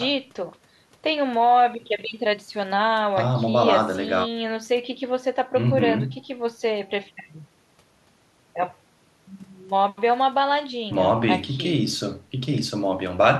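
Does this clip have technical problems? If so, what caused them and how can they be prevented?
No, this clip has no technical problems, so there is nothing that caused them and nothing to prevent.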